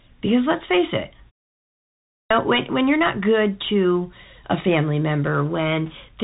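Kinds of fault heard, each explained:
Bluetooth CVSD headset codec: Throughout, the speech sounds narrow and boxed in, with nothing above about 3.8 kHz. A granular hiss lies under it, and s sounds come through scratchy and plainly damaged. This is the narrowband headset codec at work. It sends one up-or-down bit per sample, which fits a 64 kbps stream, and adapts its step size. Fast, loud high-frequency detail outruns those steps and breaks up.
Clipped start after a pause: After a silence of nearly a second, the speech at 2.2 s bursts in abruptly with its opening cut away, so "when when you're not" arrives already underway. About 105 ms is missing, up to 2.31 s. The output device went idle during the silence and needed that long to wake or relock, swallowing the first part of the returning sound.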